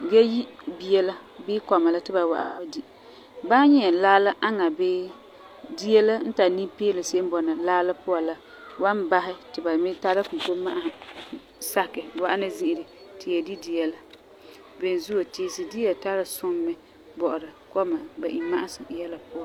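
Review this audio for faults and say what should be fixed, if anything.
AAC frame loss with concealment occurs from 2.40 to 2.68 s. Around 170 ms of coded audio is missing, which fits roughly four lost frames. The decoder covers the gap by reusing the last good spectrum with scrambled signs or interpolated energy. The speech there turns smeared, noisy or phasey before clean decoding resumes. To prevent it, carry the stream over a more reliable transport, or add forward error correction or retransmission so lost frames are recovered.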